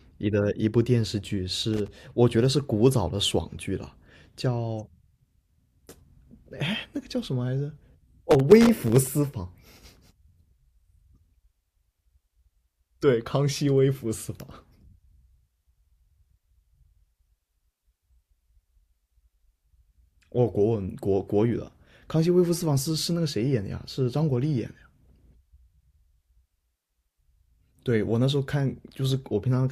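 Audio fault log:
1.73–1.88 s and 8.31–9.07 s: loose connector crackle. Two irregular bursts of scratchy crackle, the first a short 0.15 s flick and the second a longer stretch of about 0.76 s. A worn or dirty contact is making and breaking as it shifts, chopping the signal.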